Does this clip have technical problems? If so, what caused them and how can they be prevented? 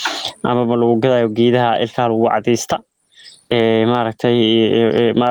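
Yes, there's gain pumping all the way through this speech clip. The gain swings around 25 dB, so the level sounds squashed. The likely cause is input gain set far too hot, with a fast limiter clamping down on each peak. To prevent it, set the gain sensibly and ease off the limiter.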